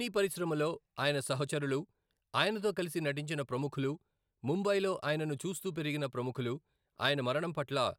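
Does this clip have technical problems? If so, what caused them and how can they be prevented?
Yes. Dropped samples cause two sharp clicks, at 3.90 s after "ఆయనతో కలిసి నటించిన ప్రముఖులు" and at 5.45 s after "నటించిన ప్రముఖులు ముంబైలో ఆయనను". Each loses only a couple of samples, so the waveform jumps abruptly, likely from a brief buffer-handoff glitch. Larger audio buffers and a single shared sample clock prevent it.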